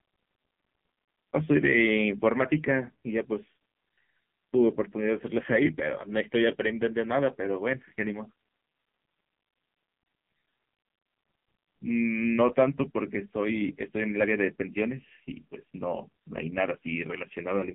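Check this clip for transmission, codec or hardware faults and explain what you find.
There's one fault, and it runs through the whole speech clip: the AMR narrowband mobile codec. Nothing above 3.4 kHz survives, and the heavy buzzy, synthetic coloring points to a low mode, roughly 5.9 kbps. At that rate the encoder rebuilds speech from a vocal-tract model excited by very few pulses, so everything sounds thin, boxy and robotic.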